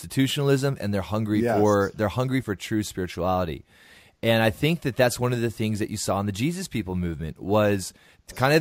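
A gritty, inharmonic fizz rides on the speech from start to finish, thickening on loud and bright sounds and sitting roughly 25 dB down. It comes from crude rate conversion, where samples were repeated without filtering, which fits a 32 kHz to 48 kHz change.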